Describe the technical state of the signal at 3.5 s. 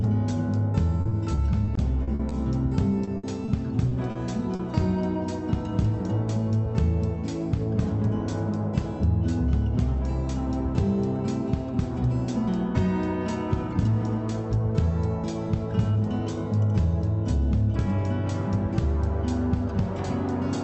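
Around 3.45 to 3.49 s there is a short concealed packet loss: about 20 ms of audio failed to arrive in time, and the receiver synthesised a continuation of the preceding sound before blending back, heard as a brief smear or wobble.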